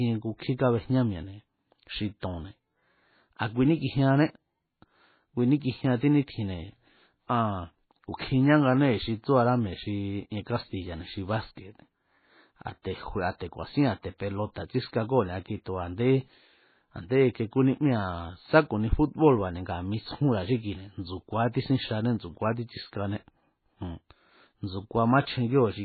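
From start to finish the speech sounds dull and watery, with nothing above 4.5 kHz and weak detail flickering in and out from frame to frame. That's heavy damage from likely MP3 compression, which fits a starved encode of around 16 kbps.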